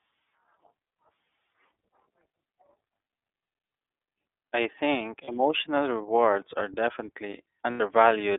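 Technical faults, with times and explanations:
Throughout, iLBC codec: the speech is band-limited to a telephone line of roughly 300 Hz to 3.6 kHz and sounds plainly rough and slightly synthetic. Each 30 ms frame's excitation is coded on its own at a rate fitting 13.33 kbps, which strips the top end and smooths away fine detail.
5.24 s and 7.71 to 7.81 s, lost iLBC frames: the sound briefly turns into a held, faintly buzzy or breathy vowel, about 30 ms at the first spot and 90 ms at the second. The decoder fills each missing packet by repeating the last pitch cycle mixed with noise. Because iLBC frames stand alone, the speech recovers almost immediately afterward.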